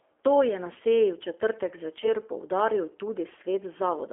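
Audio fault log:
Throughout: G.729 codec. The speech is held to a narrow line band of 300 Hz to 3.4 kHz and has plainly audible roughness and a synthetic edge, from 8 kbit/s rebuilding with a vocal-tract filter and a few pulses. Unlike plain band-limiting, the speech itself sounds coarse.
2.02–2.08 s: VoIP packet loss concealed by the speech codec. A brief gap, which fits a single lost 10 ms frame, is filled by stretching the preceding pitch and filter into a buzzy tone or coloured noise that fades. Because each frame builds on the last, the speech stays weakened until about 2.08 s, rather than cutting cleanly like a dropout.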